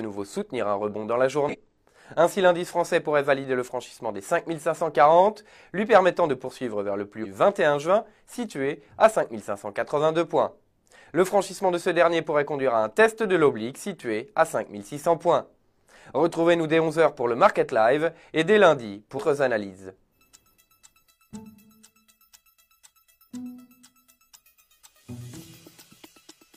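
Whole compressed frames are skipped four times, either missing from the file or rejected by the decoder as damaged, so the audio jumps forward without warning at 1.44–1.56 s, 7.20–7.26 s, 19.14–19.20 s and 25.36–25.41 s. The skips lose roughly 150 ms, 150 ms, 300 ms and 50 ms. At each join the missing stretch is simply absent.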